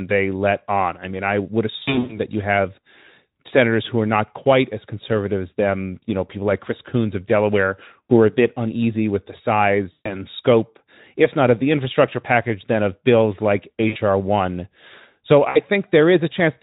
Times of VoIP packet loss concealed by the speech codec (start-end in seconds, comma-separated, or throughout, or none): 1.77-2.20, 8.05-8.17, 9.91-10.24, 13.87-13.97, 15.49-15.59